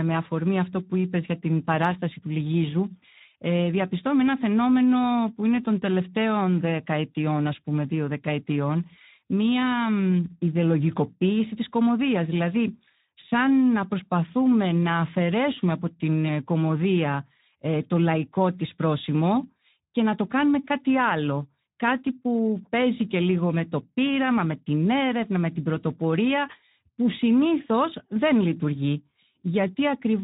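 Throughout, Speex codec damage is plainly audible: the speech sounds hoarse and noisy, consistent with a low-bitrate setting around 11 kbps, with nothing above 3.8 kHz.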